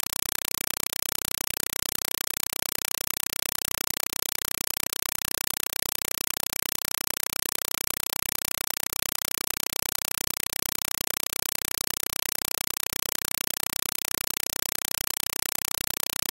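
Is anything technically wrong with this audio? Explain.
Yes. A compressed stream played as audio runs throughout. Encoded AC-3 data is reaching the output as if it were ordinary samples, with no decoding. Each frame becomes a 4 ms burst of noise, then silence, repeating 31.25 times a second. It comes out as very loud, chattering static where the sound should be.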